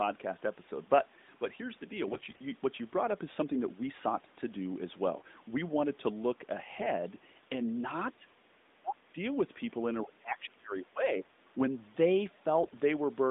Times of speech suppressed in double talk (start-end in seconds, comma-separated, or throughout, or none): 8.16-8.27, 8.74-9.16, 10.05-11.36